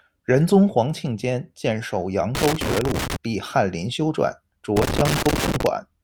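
Loose connector crackle hits the speech from 2.35 to 3.16 s and again from 4.76 to 5.67 s. A worn contact chops the signal. Irregular scratching bursts result.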